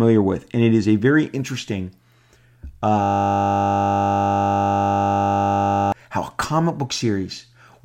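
Speech clip with a system hang loop from 3.03 s to 5.92 s. A 20 ms slice of audio repeats exactly, about 140 times. That produces a steady 50 Hz buzz. The driver or system froze while the hardware kept replaying one short ring buffer.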